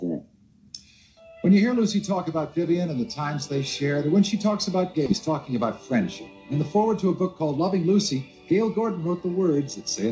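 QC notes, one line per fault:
5.06 s, skip ahead: about a second of audio is dropped and playback jumps straight forward with no gap, the two sides joined almost directly.
5.28–9.06 s, jitter buffer speed-up: short pitch-period pieces, around 150 ms in total, are removed repeatedly, so the sound runs about 4% faster at unchanged pitch.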